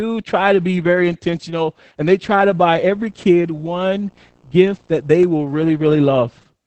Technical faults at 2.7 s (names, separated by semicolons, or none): Opus voice compression; video or display buzz